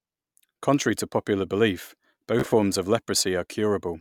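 Right after "to popular belief", at about 2.40 s, the speech breaks into a Bluetooth stutter that lasts until about 2.53 s. Audio packets failed to arrive in time. The receiver filled each gap by replaying the slice it already held. About 61 ms of sound goes missing, scattered over roughly 122 ms, which fits about four lost packets. The longest single gap is about 30 ms. The repeats give a short machine-gun buzz, then the speech resumes further on.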